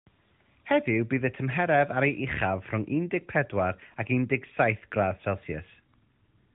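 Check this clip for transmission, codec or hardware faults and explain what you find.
Nothing in this speech clip stood out as a fault on listening.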